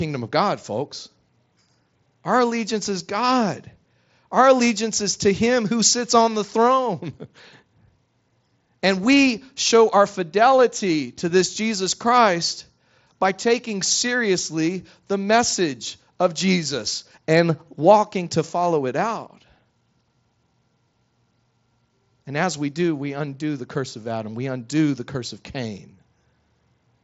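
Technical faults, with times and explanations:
Nothing stood out on listening; the speech comes through a Bluetooth mSBC headset link, with nothing above about 7.7 kHz.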